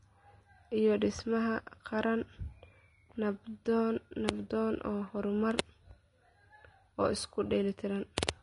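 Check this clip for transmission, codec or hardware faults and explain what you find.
One fault runs through the whole speech clip: Vorbis compression is the likely cause of the damage heard from start to finish. Nothing is present above 10.6 kHz, and the treble below that edge has been quantised so coarsely that its fine detail turns into noise of similar energy, which fits a low bitrate of around 32 kbps. The result is plainly audible: the speech sounds hissy and grainy, tones are roughened, and attacks are blurred.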